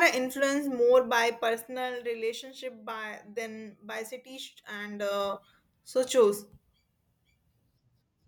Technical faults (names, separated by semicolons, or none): zipper noise